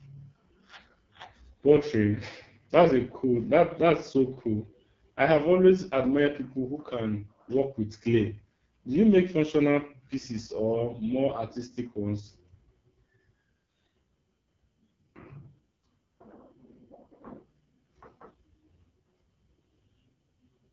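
From start to finish the speech has passed through the AMR wideband (HD Voice) codec, running in a starved low-bitrate mode; the heavy damage fits its lowest 6.6 kbit/s setting. The speech model gets too few bits to follow the voice's excitation, so every syllable turns rough and raspy, with a gritty, buzzing edge. The top band is only synthetic noise, and nothing at all is present above 7.2 kHz.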